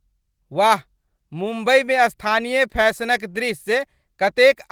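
Nothing in the recording stands out as a technical fault, so there's nothing here to walk through in time order.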